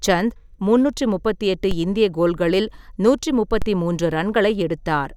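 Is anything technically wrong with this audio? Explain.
Yes. A DC step occurs at 1.71 s, between "சந்த் முந்நூற்று முப்பத்தெட்டு" and "இந்திய கோல்களில் நூற்று", and again at 3.62 s, just after "முப்பத்தெட்டு இந்திய கோல்களில் நூற்று". Each time the waveform's zero line suddenly shifts by about -13 dBFS, then drains back as a 5 Hz high-pass pulls it toward centre. Each step is heard as a low thump while the speech continues unchanged.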